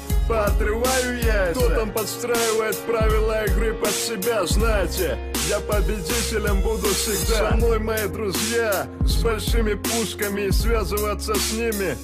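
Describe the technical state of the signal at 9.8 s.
At 9.8 s the signal is intact, with no dropout, distortion, glitch or other fault to be heard.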